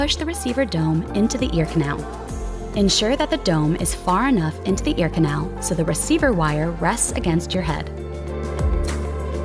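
No technical fault can be heard anywhere in the audio. Nothing calls for a time mark or a closer look.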